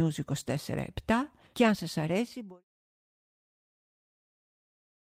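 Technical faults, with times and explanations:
Nothing stood out on listening, and the smooth fade-out that begins at about 2 s and ends at 2.64 s is an ordinary edit.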